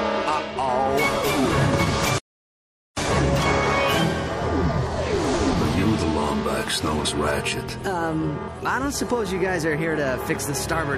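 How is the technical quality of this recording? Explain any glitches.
The technical quality is poor, with damage running through the whole recording and two distinct glitches.

Throughout, the sound is watery and swirly, with treble that stops abruptly and a metallic chirping on bright, hissy content. This is likely MP3 compression, at a data rate that fits something as low as 64 kbps. Starved of bits, the encoder chops off the high frequencies at a fixed point and throws away quiet spectral detail frame by frame. Those components flicker in and out, which produces the swirl and smears sharp attacks.

From 2.18 s to 2.97 s the audio simply cuts out for about 0.78 s, then resumes. That gap is a playback stall: the player likely ran out of data to feed the output, or its processing was held up, so nothing reached the speakers until it caught up. The result is an abrupt silence in the middle of the sound rather than any click or distortion.

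At 7.04 s the audio jumps forward by roughly 70 ms, a loss of a few compressed frames, each about 26.1 ms long. When compressed frames skipped are missing or rejected as corrupt, the decoder moves straight on to the next good frame. Adjacent MP3 frames overlap, so the join comes out as a short smeared blip rather than a sharp click, with a small piece of the sound missing.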